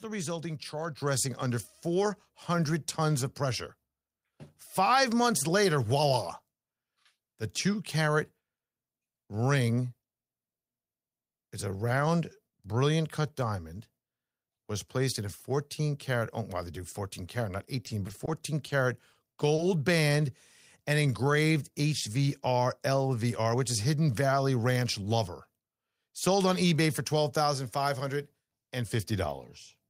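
A speech recording whose microphone volume steps up by about 5 dB at 1.02 s, voice and background rising together, unlike a talker simply speaking louder, which would leave the background unchanged. Between 17.85 and 19.60 s, scattered short gaps appear: around seven brief holes, each patched by continuing the preceding sound, causing small ticks and smears rather than audible silences. From 20.09 to 21.25 s, a jitter buffer slow-down stretches the audio to 96% speed, adding 60 ms by repeating pitch periods, so the speech drags while its pitch stays put, unlike a tape-style slowdown. From 23.24 to 24.09 s, a jitter buffer speed-up runs at 107%, trimming roughly 70 ms of pitch periods, so the speech sounds hurried without rising in pitch.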